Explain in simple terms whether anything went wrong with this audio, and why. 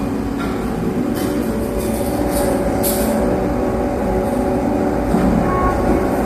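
Low-delay AAC compression affects the whole clip, from start to finish. The sound is rough and grainy, with a hiss filling the gaps between its tones and a top end that sounds dulled or artificial. The likely cause is the low-delay AAC format used in video calls. It chops audio into very short slices of about 10 ms, which capture fine tonal detail poorly, and here it was squeezed into a low data rate, so the damage is plainly audible.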